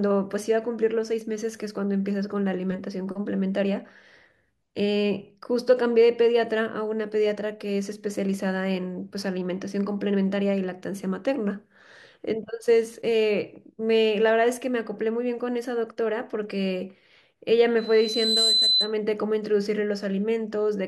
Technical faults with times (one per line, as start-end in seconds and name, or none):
17.78-18.94 loudspeaker feedback squeal